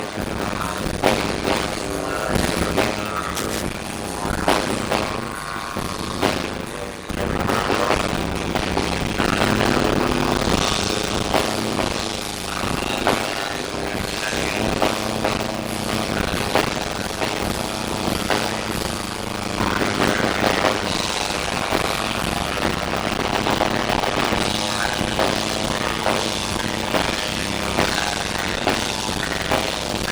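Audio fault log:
throughout: block size mismatch (padded). A steady 100 Hz buzz sits under everything, and the audio drags at about 0.53 times normal speed with its timbre unchanged. That fits 256-sample blocks being read as 480-sample ones, with the shortfall zero-filled, leaving a tiny gap every block.
3.33–3.63 s: cable scratch noise. A short patch of dense, irregular scratching rustles over the sound, roughly 10 dB below it. Most likely a worn cable or connector being moved, its contact resistance jumping around and spitting out noise bursts.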